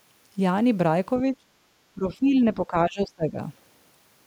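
Speech suppressed in double talk at 1.33–1.46 s and 1.95–3.38 s: the speech sinks by up to about 25 dB, likely because an echo canceller muted its own talker during overlap.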